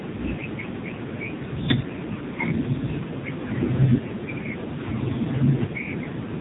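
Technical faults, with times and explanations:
Throughout, AMR narrowband mobile codec: the speech has nothing above about 3.8 kHz and a heavy buzzy, synthetic edge, because the voice is rebuilt from a vocal-tract model fed by sparse pulses in 20 ms frames, with too few bits to capture detail. The heavy damage fits one of the lowest AMR-NB modes, around 5.9 kbps. On a spectrogram the energy stops at a flat ceiling near 3.8 kHz, with smeared, blocky harmonics frame to frame.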